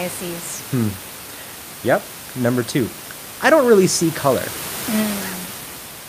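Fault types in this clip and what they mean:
No system faults are present; the room background sitting about 12 dB below the speech is part of the recording itself.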